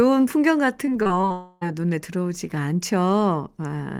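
From about 0.85 to 1.32 s the speech turns choppy. That's repeated packet loss giving the robotic sound: six short holes, the longest around 23 ms, each patched by stretching the previous sound, so roughly a quarter of that span is concealment.

Right after, from 1.32 to 1.76 s, the speech gives way to a smeared, fading continuation of the last sound with no real silence. That's likely a long network dropout, with about 0.3 s of audio lost and papered over before the speech resumes.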